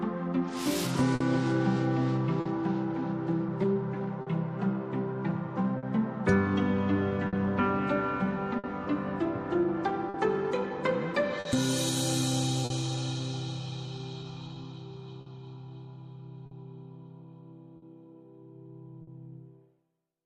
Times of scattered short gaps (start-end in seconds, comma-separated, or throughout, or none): 1.15-12.73, 15.21-19.10